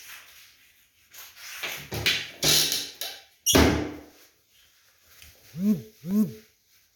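Periodic USB or driver dropouts from 0.13 s to 6.11 s: about once per second, a blocked transfer loses around a millisecond of audio to silence, heard as regular ticks.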